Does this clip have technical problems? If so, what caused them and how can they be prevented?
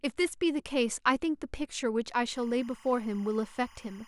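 Yes. Timecode bleed from 2.36 s to the end at 4.08 s: 25-frame linear timecode leaks in roughly 30 dB below the speech, a chirping warble showing as spectrogram bands near 1 and 2 kHz. Keep timecode on separate, shielded cabling and well-isolated tracks.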